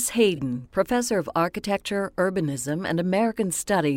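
At 0.36 to 0.39 s the speech has a corrupt frame concealed by the AAC decoder: flipped bits made it patch the gap, which fits a single damaged frame.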